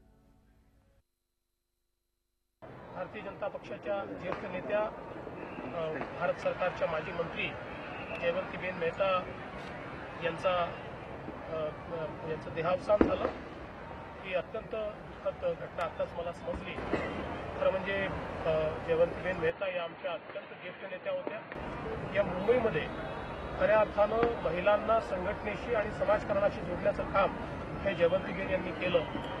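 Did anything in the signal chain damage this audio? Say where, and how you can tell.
Yes. From 19.50 to 21.55 s, nothing passes above 4.5 kHz. Level falls about 5 dB, with faint new noise. Likely an input switched to a poorer device.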